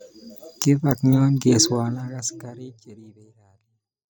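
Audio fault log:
No faults found; the speech carries an intentional smooth fade-out that begins around 1.5 s and runs to the end.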